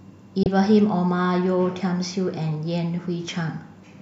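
At 0.43 to 0.46 s the speech drops out briefly in a digital broadcast dropout: the receiver muted on a bad frame, fading down in about 3 ms. Unlike a concealed packet loss, nothing is patched over. About 24 ms is simply missing, which fits one lost frame.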